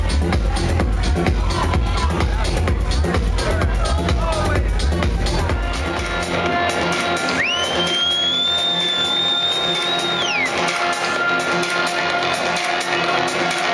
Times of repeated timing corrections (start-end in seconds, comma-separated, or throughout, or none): none